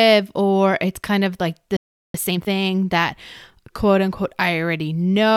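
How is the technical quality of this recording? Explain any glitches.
The recording has two linked glitches in the middle of the speech, a dropout followed by a rushed passage.

From 1.76 to 2.14 s there is a playback stall: the player most likely ran out of data or was blocked, so the speech cuts to silence for about 0.38 s.

From 2.14 to 2.50 s comes time-compressed catch-up: the player trims its backlog by splicing out short slices, so the speech runs at twice normal speed, pitch unchanged.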